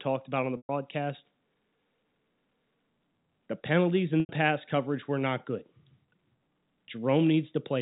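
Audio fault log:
0.57–0.69 s and 4.20–4.29 s, packet loss with pitch repetition: two gaps, about 120 ms after "about on the" and about 90 ms just before "pass coverage were not". The receiver bridges each gap by repeating the last pitch period, heard as a brief held buzz that fades out over about 50 ms. Both gaps outlast that fade, so each drops briefly to silence before the speech cross-fades back in. The sizes fit losses of four and three packets, and the band-limited G.711 telephone character carries through.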